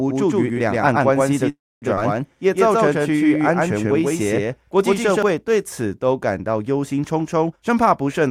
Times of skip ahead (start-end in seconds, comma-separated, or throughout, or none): 1.96-1.99